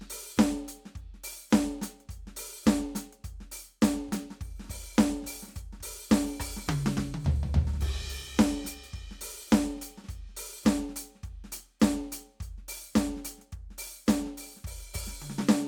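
No technical fault can be heard anywhere in this music recording.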